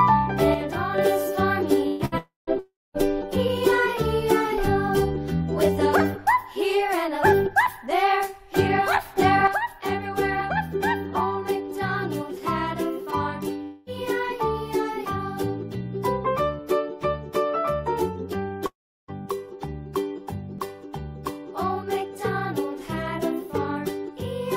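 From 0.54 to 0.98 s the level abruptly falls by about 6 dB and then recovers. This is likely one channel dropping out before the mono sum.

At 1.87 to 2.02 s and 2.05 to 2.15 s there are bursts of packet loss. The last sound is stretched into a fading buzz or hiss, and about 120 ms and then 60 ms of audio are skipped.

Long network dropouts follow at 2.18 to 2.50 s and 2.59 to 2.97 s. Concealment fades into silence, lasting 160 ms and then 220 ms, and about 300 ms and 360 ms of audio go missing. This is likely a network interruption.

From 9.47 s to the end, the same 6 dB drop recurs, likely from one channel dropping out again.

Inside that stretch there are two more long network dropouts. At 13.63 to 13.89 s, a fading fill replaces about 240 ms without reaching silence. At 18.66 to 19.11 s, about 420 ms is lost, ending in 350 ms of silence before the audio resumes further on.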